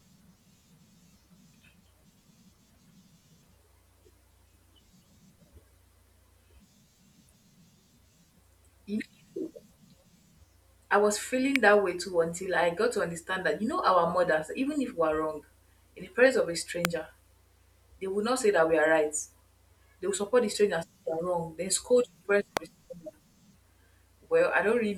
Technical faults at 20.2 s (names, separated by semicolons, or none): none